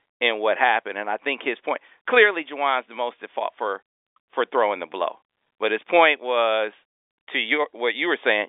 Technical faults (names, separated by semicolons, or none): none